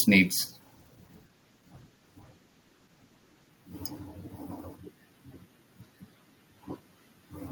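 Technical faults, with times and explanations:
0.64 to 3.61 s, call bitrate drop: the encoder's budget falls from 40 to 15 kbps, lowest for about 2.9 s, so speech is coded coarsely and sounds rough and muffled. On a spectrogram the upper band thins and cuts off, with smeared, blocky texture below.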